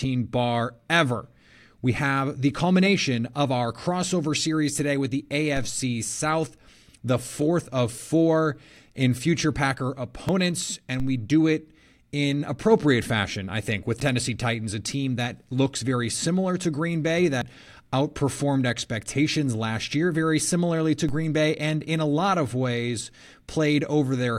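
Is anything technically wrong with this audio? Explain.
Yes. DC steps at 5.57, 11.00 and 21.09 s: the waveform's zero line jumps abruptly, then drifts back as a 2 Hz high-pass bleeds it away, heard as low thumps.

At 10.29, 14.00 and 17.42 s the speech skips ahead by roughly 20, 70 and 70 ms, likely dropped buffers from an overrun, giving visible waveform discontinuities.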